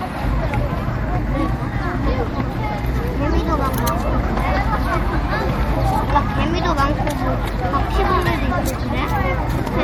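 Throughout, plainly audible MP3 compression, likely at a low bitrate near 64 kbps, gives watery swirling; a spectrogram shows flickering speckled gaps, with content still reaching 21.1 kHz.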